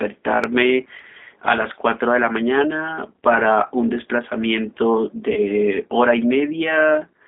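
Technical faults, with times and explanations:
Throughout, G.729 codec: the speech has been squeezed to about 8 kbit/s, and the sound is rebuilt from a vocal tract filter, a pitch predictor and a few pulses per frame. The band runs roughly 250 Hz to 3.6 kHz. The voice sounds thin, rough and plainly synthetic.
5.33 to 5.40 s, VoIP packet loss concealed by the speech codec: about 30 ms of audio went missing, which fits one lost packet. The decoder stretched its last pitch and filter into a fading buzzy tone or coloured noise. The voice stays weakened briefly after recovery.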